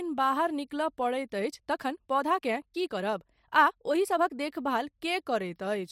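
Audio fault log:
1.40–4.44 s time-stretched section: speech abruptly turns rushed at 1.35 times speed with unchanged pitch, likely from software dropping short pieces to shorten it.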